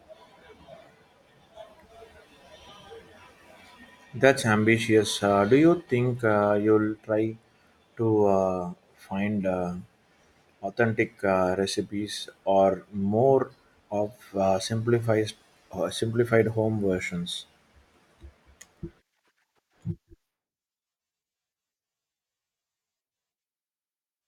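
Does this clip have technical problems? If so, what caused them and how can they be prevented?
Yes. At 1.68 s a corrupt frame was decoded: bits in one compressed frame were flipped and the decoder played it anyway, so misread values put energy at wrong frequencies for that frame, heard as a brief, faint chirp, squeak, blip or burst of noise far below the speech level. Error detection such as checksums on each frame, with concealment instead of decoding damaged frames, would prevent it.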